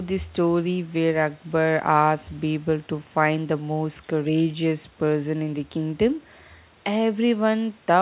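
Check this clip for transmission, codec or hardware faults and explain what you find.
No transmission, codec or hardware faults found in this speech; the band stops at 4 kHz, which fits a narrowband call codec such as G.711 A-law on the call path.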